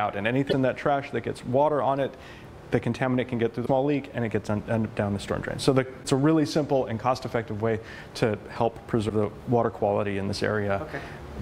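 Short glitches break through the sound at 0.49, 3.62, 6.0 and 9.08 s, each lasting about 30 to 55 ms. This is damaged data in a compressed stream: corrupted bytes make the decoder misread frames and lose sync until it finds the next valid header.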